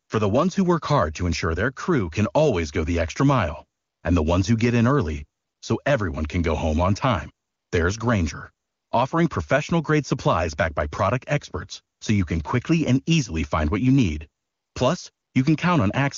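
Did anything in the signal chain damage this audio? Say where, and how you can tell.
Yes. AMR comfort noise, in call processing: the phone's silence detection stopped sending speech frames at 0.05, 3.79, 5.41, 7.47 (after "go home on time"), 8.65 (before "offering professional grade supplies"), 11.95 (between "backed by product experts" and "so you can quickly"), 14.43 and 15.11 s, for 40 to 320 ms each. The receiver filled each gap with steady synthetic noise, replacing the real background. Unlike packet-loss dropouts, these gaps are smooth noise rather than silence or clicks, while the wideband speech itself stays clear.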